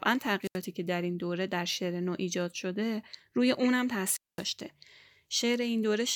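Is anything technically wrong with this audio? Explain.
Yes. Wireless microphone squelch dropout occurs twice, from 0.42 to 0.59 s and from 4.08 to 4.46 s. Both times the analogue FM radio link weakens until the receiver's squelch gate shuts the output off rather than pass raw noise. Each event is heard as a quick surge of hiss, then a hole of near silence lasting about 78 ms in the first and about 216 ms in the second, before the speech comes back.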